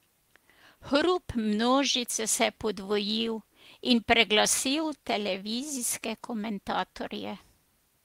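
No technical faults are audible anywhere in the speech recording.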